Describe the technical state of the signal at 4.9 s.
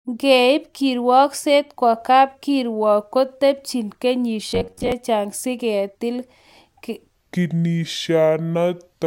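At 4.9 s the signal is near the end of a stretch of robotic sound from repeated short buffers, running from 4.50 to 4.92 s. The speech becomes a rigid metallic buzz at 93.8 Hz. This is likely caused by audio arriving too seldom, so a block of roughly 10.7 ms is replayed and about half the real audio is skipped. A spectrogram shows flat, evenly spaced harmonic lines at multiples of 93.8 Hz, and the waveform shows identical cycles repeating.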